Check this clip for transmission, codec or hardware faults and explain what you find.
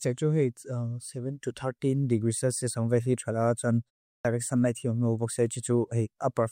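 One fault: a clipped start after a pause at 4.18 to 4.25 s. Following a 0.36 s pause, the output path had not woken, cutting about 68 ms so the next sound bursts in abruptly, its onset gone.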